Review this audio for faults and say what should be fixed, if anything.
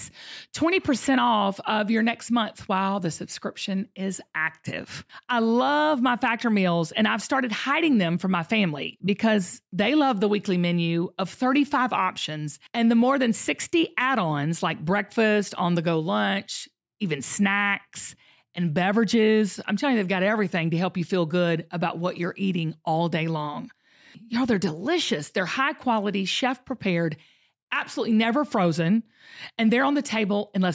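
No faults found, so nothing needs fixing.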